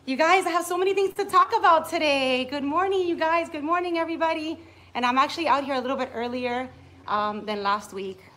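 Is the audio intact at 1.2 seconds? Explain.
Yes, nothing's lost, but a short stall from a late packet runs 1.11 to 1.18 s: the buffer ran dry, so the last sound was held for about 42 ms, with a slight buzz or dip.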